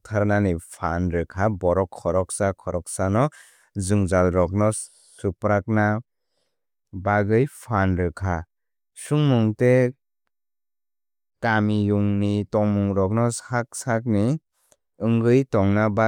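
Nothing goes wrong anywhere in this bit of speech, so there's no technical fault to point to.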